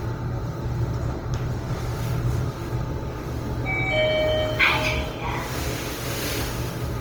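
Throughout the clip, the audio has most likely passed through Opus compression in its music mode at a low bitrate, around 24 kbps. Starved bands get filled with folded or noise content, so these sounds turn plainly grainy, rough and noisy.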